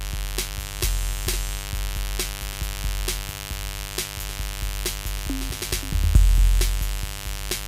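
A steady, raspy buzz runs under the music from start to finish, sitting only around 10 dB below it. This is mains buzz: sharp switching spikes from a dimmer, rectifier or unshielded line, twice per 50 Hz cycle, spraying harmonics up into the kilohertz range.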